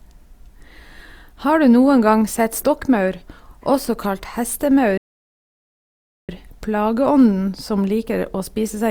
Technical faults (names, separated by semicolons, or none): playback stall